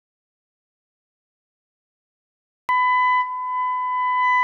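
The clip opens already in an audio dropout to silence: from 0.0 to 2.69 s there's pure silence, not even room tone, before the sound cuts in mid-flow. Most likely the input was lost, through a disconnected device, dead link or stray mute, while the recorder kept writing.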